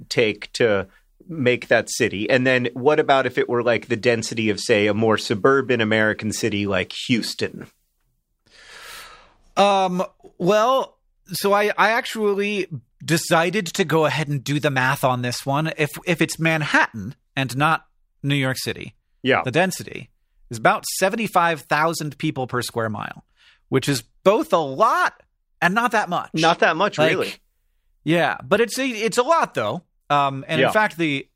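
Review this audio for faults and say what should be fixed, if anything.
No faults turn up anywhere in this speech recording. Nothing needs to be fixed.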